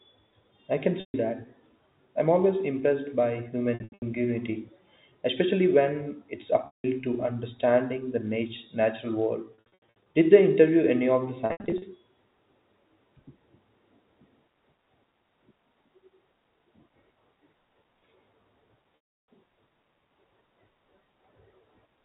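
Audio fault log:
1.0 to 19.3 s, packet loss with pitch repetition. Gaps start at 1.0 s after "I can", 3.74 s, 6.66 s, 9.54 s after "natural world", 11.46 s after "interview any of the", and 18.96 s. Each loses 140 to 360 ms. Three are scattered, in runs of up to 80 ms. The receiver loops the last pitch period, so the sound hangs with a buzzy hold. Longer gaps fade to silence, then cross-fade back. The timing fits 20 ms packets.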